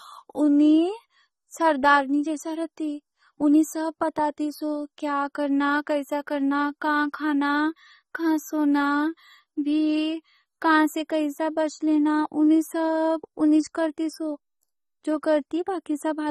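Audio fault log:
Throughout: AAC compression, likely AAC-LC. Nothing reaches above 12.5 kHz, so the speech sounds dull, and the codec damage is plainly audible as a smeared, fizzy texture on sibilants and a warbling on held sounds. This fits a low bitrate near 24 kbps, where the coder quantises its frequency lines coarsely and leaves gaps. A plain low-pass filter would also remove the top but would not add this shifting fizz and warble.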